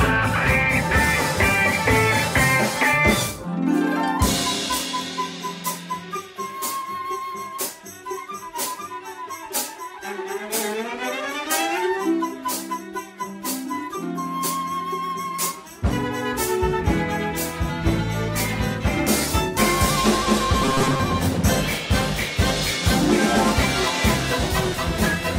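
From 20.65 to 21.00 s the audio takes on a robotic sound from repeated short buffers: a rigid, metallic buzz at 133 Hz. The likely cause is audio arriving too slowly, so roughly half the material is replaced by repeats of a segment about 7.5 ms long.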